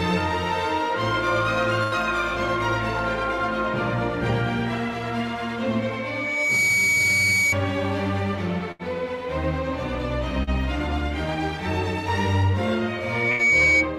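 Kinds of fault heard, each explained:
Burst of packet loss: A run of packets failed to arrive, so the receiver stretched the last sound for roughly 80 ms and faded it, then jumped ahead, skipping about 80 ms. On a spectrogram, a smeared, decaying band appears before an abrupt discontinuity, at 1.83, 8.72 and 13.31 s.
Loudspeaker feedback squeal: The microphone re-amplifies its own loudspeaker until 2.3 kHz runs away, swelling over well under a second into a steady tone about 5 dB above the sound. Spectrograms show a bright horizontal line at 2.3 kHz, from 5.78 to 7.56 s and 12.87 to 13.90 s.
Short concealed packet loss: About 40 ms never reached the decoder, and the receiver patched the hole by extending the preceding sound before blending back, giving a brief smear near 10.43 s. The waveform shows a short, slightly repetitive stretch; the spectrogram, a momentary blur of detail.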